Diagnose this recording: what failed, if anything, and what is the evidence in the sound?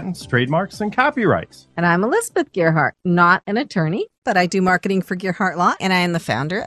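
Codec stage: the whole clip is dull and gurgling, likely MP2 compression at a rate fitting about 80 kbps. A spectrogram shows upper sub-bands blinking out.

Reception stage: DAB burbling from 4.67 to 4.84 s gives brief blips of noise where bit errors corrupt sub-band samples. A spectrogram shows single bands flaring frame by frame.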